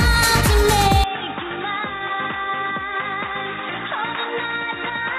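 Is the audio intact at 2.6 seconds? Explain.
No. From 1.04 s to the end, the sound is cut off above 3.8 kHz, turning dull and boxy. It drops roughly 10 dB and gains faint new background noise. There is no gap. This likely means the input switched to a poorer device.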